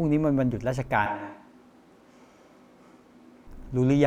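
From 1.06 s to 3.47 s the speech abruptly turns roomy and hollow, with thinner bass, then snaps back just as suddenly. This is a switch to a distant microphone, likely because the close microphone's feed dropped out and a farther pickup took over. Loudness stays about the same, but a room noise floor appears, roughly 25 dB below the speech. A spectrogram shows weaker low frequencies, smeared reverberant tails and filled gaps; the waveform's pauses no longer fall to near silence.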